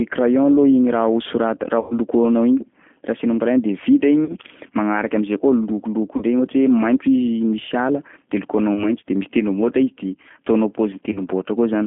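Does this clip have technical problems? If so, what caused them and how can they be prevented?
Yes. The whole recording has passed through the G.729 codec, here the G.729A variant at 8 kbit/s. The line band runs from about 150 Hz to 3.4 kHz, so nothing above that survives. The codec rebuilds the speech from a vocal tract filter and a few pulses per frame. That makes the voice plainly rough and slightly synthetic throughout. A wideband codec such as G.722 or Opus would prevent this.

There are also five bursts of VoIP packet loss concealed by the speech codec. They occur at 1.80–1.93 s, 4.25–4.36 s, 6.17–6.24 s, 8.74–8.92 s and 11.12–11.20 s. The second burst ends just before "magnaraky am'zay". About 100 ms of audio is missing in the first gap, 40 ms in the second and third, and 20 ms in the last two. The decoder stretches its last pitch and filter into a fading buzz or coloured noise. The voice then stays weak briefly as the frames recover. 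A better network path, jitter buffering or forward error correction would prevent it.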